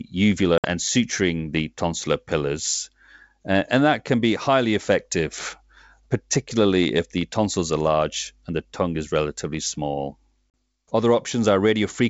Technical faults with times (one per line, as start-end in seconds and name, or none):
0.58-0.65 packet loss on an ADPCM call
10.52-10.54 packet loss on an ADPCM call